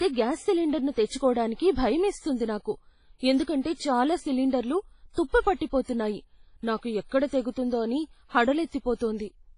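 WMA compression runs throughout the speech, with heavy damage. The audio has a ringing, washy quality and a hiss that swells and fades with the level of the voice, which likely comes from a transform codec of the Windows Media Audio kind. Long transform blocks smear quantisation noise over tens of milliseconds around each sound. Nothing is left above 10.1 kHz and weaker detail is stripped away, which fits a low bitrate of around 24 kbps.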